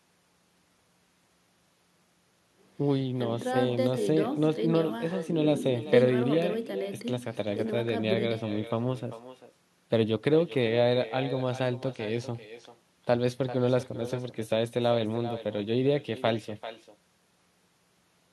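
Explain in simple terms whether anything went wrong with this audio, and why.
Yes, something went wrong. This is echo with no canceller. Throughout the speech, a quieter, thinner copy of every word returns a little under half a second later.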